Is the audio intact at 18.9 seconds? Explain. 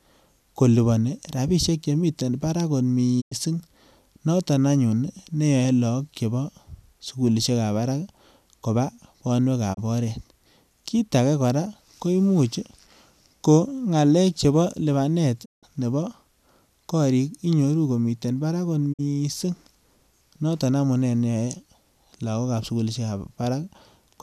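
No. At 18.92 s there is a digital broadcast dropout. The receiver stopped getting usable frames, whether from signal loss or from frames failing their checksum, and muted its output until valid data returned. The speech fades to silence over about 20 ms and stays silent until 19.01 s. About 48 ms of programme is missing, which fits roughly two lost frames. What was transmitted in that gap is lost, and the speech resumes from a later point.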